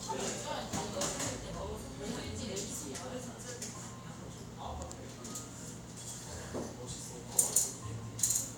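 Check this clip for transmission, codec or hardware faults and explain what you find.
Nothing turned up here; the audio comes across without any transmission, codec or hardware trouble worth flagging.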